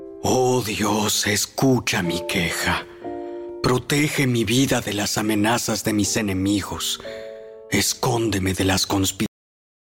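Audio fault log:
9.26–9.89 s, cut-off end: the sound stops abruptly at 9.26 s, mid-event, and drops straight to digital silence for the final 0.6 s. The closing buffers were never written or played back, so there is no natural decay or fade.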